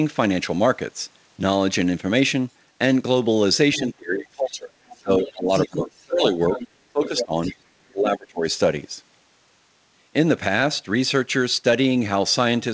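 At 3.74 to 3.8 s a faint second voice, about 20 dB below the talker, slips in. It is other side's voice leaking through, likely loudspeaker echo the canceller failed to remove. It returns at 4.87 to 6.08 s at about 10 dB down, at 6.48 to 6.68 s, and at 7.03 to 7.56 s at only about 5 dB down.

Overlapping this, from 3.78 to 4.71 s the talker dips by up to roughly 25 dB. Further dips of around 15 to 20 dB follow at 5.03 to 6.39, 6.93 to 7.52 and 7.92 to 8.46 s. This is speech suppressed in double talk: with both sides active, the echo canceller likely turned everything down rather than separate them. Through the G.722 call path the audio carries nothing above 8 kHz.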